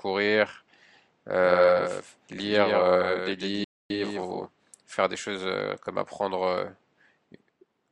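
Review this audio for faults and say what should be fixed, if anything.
From 1.40 to 4.46 s the speech has a doubled audio track: a second full-band copy trails about 150 ms behind, around 5 dB quieter, with no room colour, and it cuts in and out abruptly. The likely cause is the same signal being captured again through a slower route. On a spectrogram every speech feature is repeated as a fainter, shifted twin, and the waveform's envelope shows an echo-like second contour. Route each source through a single capture path and mute any monitoring return that feeds back into the recording.

A playback stall silences the audio from 3.64 to 3.90 s, about 0.26 s, and the speech then resumes mid-flow. The likely cause is the player running out of buffered data. The waveform drops to a flat line and the spectrogram shows a clean vertical blank band. Give the player a larger buffer and keep its audio thread free of blocking work.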